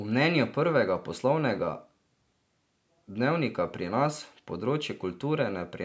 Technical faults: aliasing

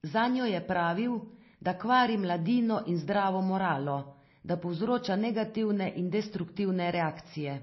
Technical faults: MP3 compression

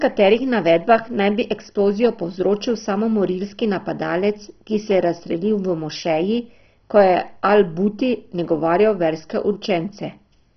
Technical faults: MP2 compression

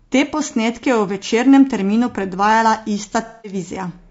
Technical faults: low-delay AAC compression; AAC frame loss with concealment

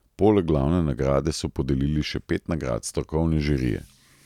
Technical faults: none

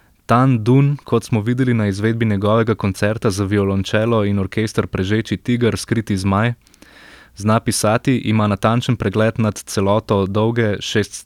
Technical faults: none

